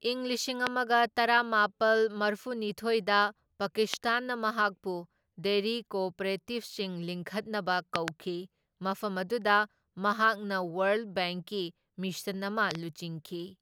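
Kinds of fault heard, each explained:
Loud pop: A sudden voltage pulse, likely from a plug, switch, static discharge or driver glitch, gets added to the signal path, and the circuitry after it shapes the pulse into a brief spike. Here that gives sharp pops standing far above the speech, roughly 20 dB louder, at 0.67 s and 3.94 s, then a double pop from 7.96 to 8.10 s and another pair from 12.71 to 12.77 s. The speech carries on underneath each one.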